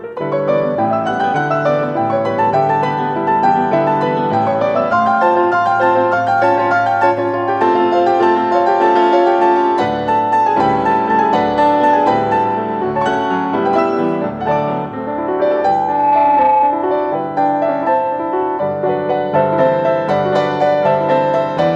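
From 15.44 s to 17.13 s a loudspeaker feedback squeal rises at 857 Hz. The microphone is re-amplifying its own loudspeaker output, and at that frequency the loop gain passes unity. The tone swells over roughly 0.7 s to sit about 5 dB above the programme.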